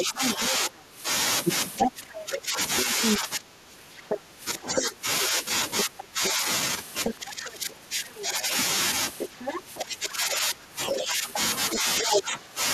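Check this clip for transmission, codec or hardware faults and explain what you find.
Two related echo-handling faults run through this speech clip: a second voice leaking in from the far end, and the talker's own voice being pushed down while both sides overlap.

The other side's voice leaking through can be heard from 0.0 to 0.49 s, from 1.78 to 8.21 s, from 9.18 to 9.77 s, and from 10.87 to 12.22 s. It is a separate voice under the talker, about as loud as the talker in most stretches and a little quieter in the 9.18 s stretch. The likely cause is the talker's loudspeaker playing the far end back into the microphone, with the echo canceller failing to remove all of it.

Speech suppressed in double talk affects the talker's voice across nearly the whole clip, from 0.0 to 12.54 s, for about seven seconds in total. The voice dips, thins and drops out in pieces, falling by around 15 dB at its worst. 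This likely happens because the echo canceller cannot separate the near talker from the loudspeaker echo when both are active, so it turns both down together.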